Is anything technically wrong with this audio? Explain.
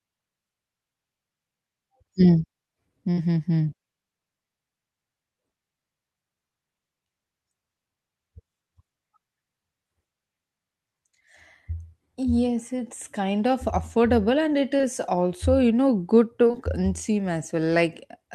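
Yes, there are two kinds of packet-loss damage in this speech.

At 3.11 to 3.19 s there's a burst of packet loss: about 60 ms of audio never arrived, and the receiver papered over it by carrying the last sound forward and fading it down for roughly 58 ms. You hear a brief held buzz or fading hiss, then the talker picks up a little further along, with that slice of speech simply gone.

The other problem is short concealed packet loss, in two pairs of back-to-back 20 ms drops. The first pair runs from 14.77 to 14.85 s, right before "also you know good", and the second from 16.47 to 16.55 s, just after "also you know good". Each time the decoder patched about 20 ms per packet by extending the preceding pitch or noise and blending back in, so it comes across as a quick smear or wobble, and a short consonant there can go missing.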